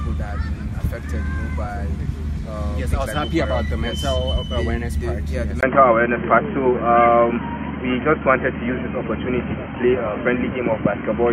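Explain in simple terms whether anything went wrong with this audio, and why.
At about 5.61 s the sound suddenly turns dull and boxy and stays that way to the end. A tiny gap, about 20 ms, marks the change. Afterwards nothing above about 3.2 kHz gets through, the loudness shifts a little, and a faint new background noise appears. This points to an input switched to a poorer device, most likely a change to another microphone or a headset's call mode that passes a much narrower range of sound.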